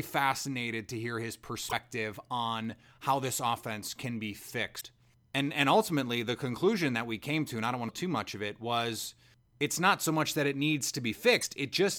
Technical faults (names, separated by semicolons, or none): damaged data in a compressed stream